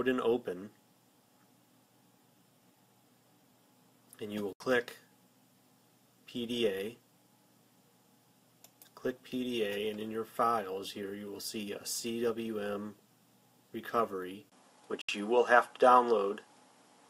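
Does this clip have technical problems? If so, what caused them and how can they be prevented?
Yes. Two kinds of fault are audible.

A Bluetooth stall drops the sound to silence for about 73 ms from 4.53 s and again for about 71 ms from 15.01 s. Each gap is a clean hole, and the audio resumes after it. This is likely radio interference delaying packets: the receiver's buffer emptied, and playback waited for the retransmissions to arrive. Keeping the source and headphones close, away from crowded 2.4 GHz sources, and using a larger receive buffer prevents this.

An input switch to a poorer device occurs at 14.50 s and lasts to the end of the clip. A 20 ms silence marks the switch. After it, nothing remains above 11.4 kHz, so the sound turns duller. The level shifts by about 5 dB, and a new noise floor appears, roughly 45 dB below the signal. This pattern fits the system changing input mid-recording to a narrower-band microphone or headset call profile. 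Fixing the input device in the recording settings, and disabling automatic switching to headset microphones, prevents this.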